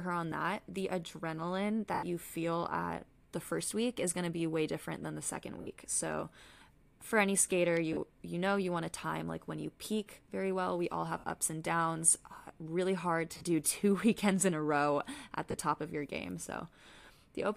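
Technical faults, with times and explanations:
1.94 to 15.54 s, lost LE Audio frames: dropouts at 1.94 to 2.03 s (90 ms, just before "you feel at the"), 5.61 to 5.67 s (60 ms), 7.93 to 7.97 s (40 ms, between "for any skater" and "you know you want"), 11.18 to 11.24 s (60 ms), 13.35 to 13.43 s (broken-up gaps, the longest about 40 ms) and 15.51 to 15.54 s (30 ms, between "in a row at" and "top of your game"). Each gap becomes a brief grainy smear because the decoder repeats the last spectrum with scrambled phase instead of real sound. The longest gap also fades partway. The gap lengths fit the 10 ms frames of the likely LC3 Bluetooth link.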